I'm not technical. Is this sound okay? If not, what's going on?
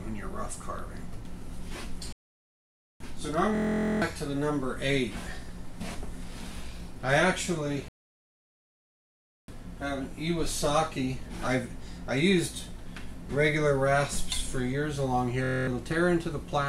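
No. There are two kinds of fault.

A playback stall cuts the sound to silence from 2.13 to 3.00 s and again from 7.88 to 9.48 s, likely because the player briefly ran out of data.

A system hang loop appears at 3.55 to 4.02 s and 15.44 to 15.67 s. The computer froze while a 23 ms scrap repeated, heard as a 43 Hz buzz that fits a 1024-sample buffer. About half a second and a fifth of a second of sound are lost.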